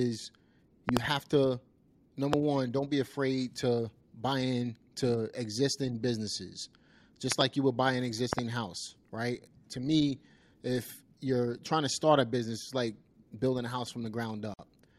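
A loud pop lands at 0.89 to 0.99 s, just before "have to". It is a double pop, sharp and forceful. Another loud pop, a single one, follows at 2.33 to 2.35 s, just before "one don't be afraid". Double pops come again at 7.32 to 7.43 s and at 8.33 to 8.41 s, the last between "you would buy an" and "house right". They stand roughly 20 to 25 dB above the speech. The speech carries on underneath each one. A sudden voltage pulse entering the signal chain, from a plug, switch or static, is the likely cause.

At 14.54 to 14.59 s there is a gap at a join of encoded pieces. The speech drops out for about 52 ms and then resumes where it stopped. The edges are smeared by the codec. Two separately encoded segments were butted together without trimming. The encoder's start-up delay and the padding in the last frame stayed in and left this silence.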